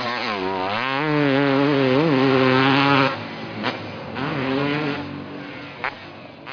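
No technical faults are audible.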